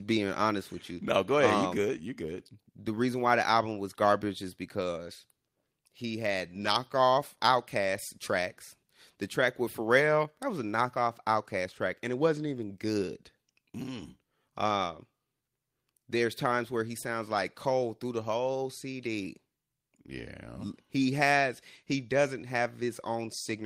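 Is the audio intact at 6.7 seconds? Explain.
No. Just after "he had", from 6.61 to 6.67 s, there is a lost packet rebuilt from error correction, which fits two lost packets. The decoder played their low-bitrate copies, so nothing drops out, but the sound turns rough and noisy. The waveform stays continuous, and the spectrogram shows a short, smeared, grainier patch.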